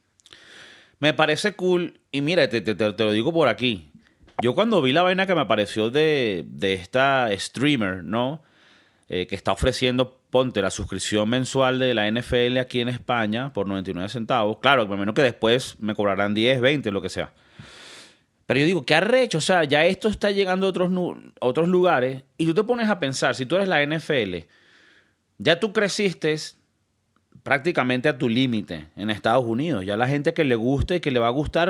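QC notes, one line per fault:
throughout resampler restarted on every block: the rate converter processed each 20 ms block in isolation and lost the neighbouring samples at every edge. The resulting small error on each boundary adds a 50 Hz buzz under the speech that vanishes in pauses.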